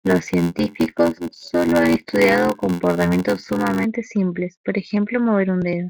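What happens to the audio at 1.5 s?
A block size mismatch (padded) runs from 0.0 to 3.84 s, ending just before "simples por ejemplo". Each short written block is zero-filled to a longer read, which fits a 512-sample read, giving an 86.1 Hz buzz and playback at 0.861× speed with near-normal pitch.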